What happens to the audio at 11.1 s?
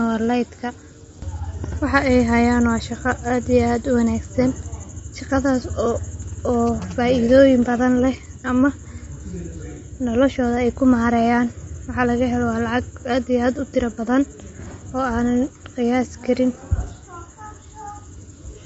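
Low-delay AAC compression runs through the whole clip, including 11.1 s. The plainly audible coding damage and nothing above 7.8 kHz likely come from AAC-ELD quantizing short frames coarsely, consistent with roughly 24 kbps.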